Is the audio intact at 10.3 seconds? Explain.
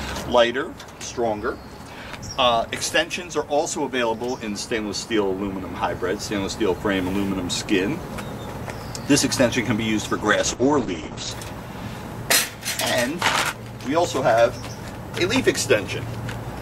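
No, a call bitrate drop runs from 10.18 to 11.37 s. The encoder's rate falls from 96 to 10 kbps, coarsening the coding and narrowing the bandwidth from 20 kHz to 8 kHz, so the sound turns rough and muffled until it recovers.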